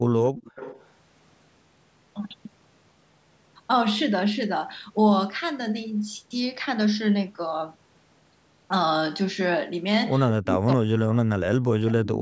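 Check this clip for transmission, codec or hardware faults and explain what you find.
Two call-path faults are audible: echo leak and speech suppression during double talk.

Echo leak, 0.24 to 0.89 s and again briefly at 12.14 to 12.18 s: a far-end echo canceller likely let part of its loudspeaker pickup through and sent it back. The result is a faint copy of the speech trailing by about 252 ms, roughly 15 dB below the direct sound.

Speech suppressed in double talk, 10.4 to 12.2 s: with both sides talking at once, the echo canceller likely could not tell the local talker from loudspeaker echo and attenuated both. The speech dips and breaks up in pieces over about a second and a half, sinking by as much as around 40 dB.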